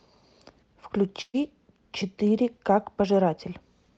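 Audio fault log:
1.21 to 1.36 s, burst of packet loss: the last sound gets held and faded for about 120 ms, drops briefly to silence, then speech resumes with 120 ms missing.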